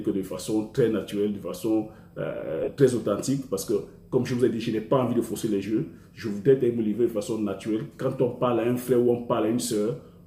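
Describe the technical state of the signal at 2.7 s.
At 2.7 s the signal is just leaving a burst of lost LE Audio frames, spanning 2.64 to 2.68 s. About 37.5 ms of the Bluetooth LE Audio stream never arrived, which fits five 7.5 ms frames. To fill the gap, the LC3 decoder repeated the last good spectrum with randomised signs and began fading it after the first few frames. Any tonal content there turns into a brief noisy smear, heard against the light codec coloration that runs through the whole clip.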